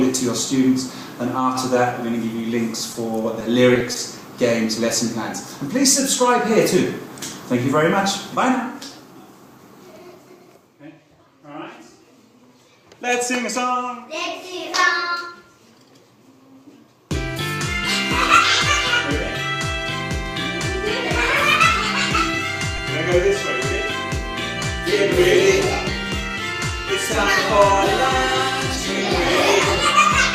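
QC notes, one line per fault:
3.39–3.96 s, repeated packet loss (robotic sound): a quick cluster of short holes, roughly five of them, each patched by stretching out the last bit of sound before it. About 70 ms gets filled that way and around 20 ms just drops out, with no single gap longer than 20 ms. It's only about 12% of that half-second, but the stacked repeats give it a choppy sound with pieces missing.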